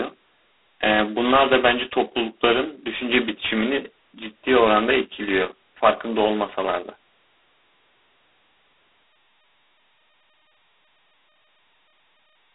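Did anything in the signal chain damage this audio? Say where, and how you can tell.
Yes. G.726 ADPCM damage runs throughout the speech, at the codec stage: a harsh, rasping hiss rises and falls with the speech level, and nothing passes above 3.9 kHz. That points to 16 kbit/s, where only 2 bits per sample code the prediction error.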